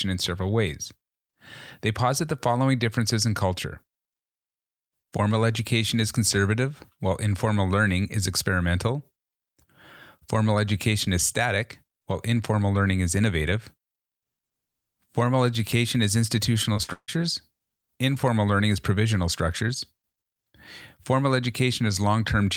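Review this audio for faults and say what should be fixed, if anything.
Repeated packet loss (robotic sound) runs from 16.73 to 17.10 s, right after "education is". Short holes, the longest 150 ms, are patched by stretching the previous sound, so most of that stretch turns choppy rather than falling silent as a plain dropout would. Prevent it with a steadier network path and a larger jitter buffer.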